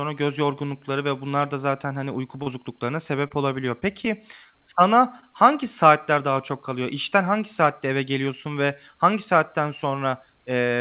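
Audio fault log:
2.43–2.48 s, 3.28–3.32 s, 3.80–3.84 s, 5.20–5.24 s: short concealed packet loss. Each time about 20 ms of audio failed to arrive in time. The receiver covered the gap by extending the preceding sound for roughly 20 to 30 ms before blending back into the real signal. Each event is a brief smear or wobble. The last one falls just before "hangi saatler daha çok". The audio throughout is band-limited below 4 kHz, consistent with G.711 A-law.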